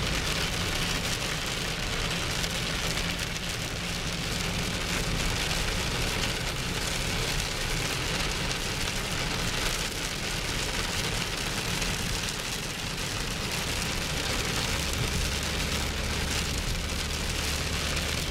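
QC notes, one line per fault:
No faults found.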